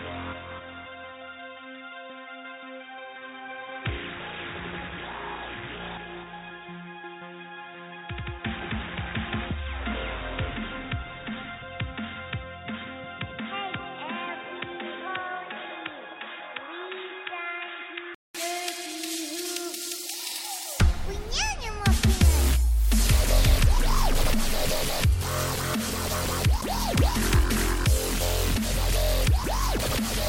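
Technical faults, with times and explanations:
0.00–18.35 s, input switched to a poorer device: for the first 18 seconds the sound is dull and boxy, with nothing above 3.8 kHz, sits about 10 dB quieter, and carries its own faint background noise some 45 dB down. At 18.35 s there's a 200 ms gap, then the full band, normal level and original floor return. That pattern points to the recording likely running on a narrower-band mic or headset call profile before the system switched back.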